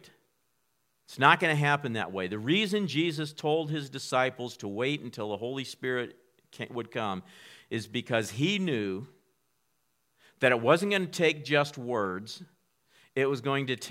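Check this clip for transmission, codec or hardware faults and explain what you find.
Nothing faulty turns up anywhere in this speech recording.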